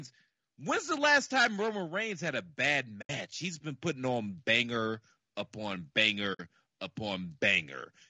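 Low-delay AAC compression is heard throughout: the speech sounds rough and grainy, likely from AAC-ELD at around 32 kbps, whose short frames resolve pitch harmonics poorly.

AAC frame loss with muting occurs at 3.01–3.10 s, after "had a bad", and at 6.33–6.40 s, after "putting on banger upon". The decoder zeroed the missing frames, leaving soft-edged holes of about 80 ms and 60 ms.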